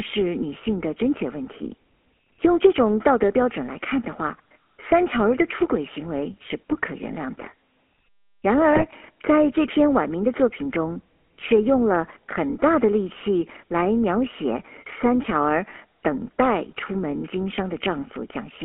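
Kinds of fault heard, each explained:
GSM full-rate codec: the speech passes through the GSM full-rate coder, its vocal-tract model plus sparse pulse excitation leaving a plainly audible buzzy roughness, band-limited to about 250 Hz to 3.4 kHz.
GSM bit errors: corrupted bits reach the decoder, distorting spectrum and level for a few frames, heard as squawks and gargling near 8.72 to 8.84 s and 15.70 to 15.81 s.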